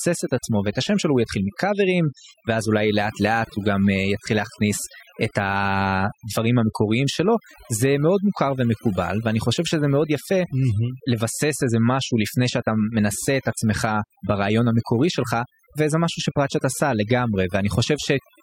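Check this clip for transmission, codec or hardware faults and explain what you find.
The one fault runs through the whole speech clip, and it comes from processing rather than transmission or hardware. Overdone noise removal: heavy suppression mutes frequency bands near the noise estimate, leaving a lowered background that breaks up into twinkling specks, unlike a noise gate's whole-signal cut-offs.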